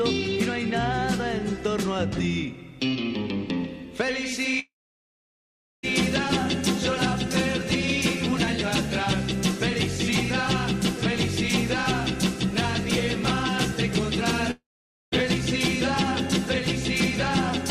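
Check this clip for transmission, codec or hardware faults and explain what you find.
Two gaps from what is likely a long network dropout, where audio stopped arriving and the receiver could only bridge the hole. From 4.59 to 5.85 s, about 1.24 s of sound is lost: a brief fading buzz or hiss, then roughly 1.1 s of silence before playback resumes further on. From 14.51 to 15.14 s, about 0.62 s is lost the same way, with around 0.5 s of silence after the short fade.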